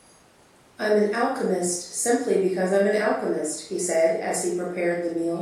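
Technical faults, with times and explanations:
Nothing in this speech recording stood out as a technical problem on listening.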